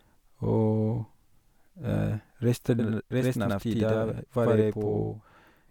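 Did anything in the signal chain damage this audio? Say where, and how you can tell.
Yes. From 2.79 s to the end of the speech, every syllable has a same-level slap about 93 ms behind it. This is channel delay (doubling) at the driver or buffer stage. One channel is running late by a long block, which fits a 4096-sample buffer, and then both channels are summed to mono. Because the copy lags so far, the ear hears a distinct second voice rather than comb filtering.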